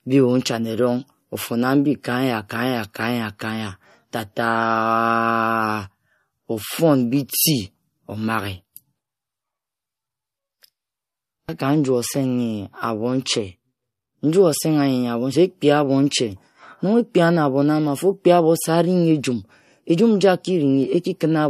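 Throughout the speech, the sound has a plainly audible watery, swirling quality, with smeared consonant onsets and nothing above 14.6 kHz. This is likely MP3 compression, at a level that fits a low bitrate around 48 kbps, cutting the treble and letting weak frequency detail flicker between frames.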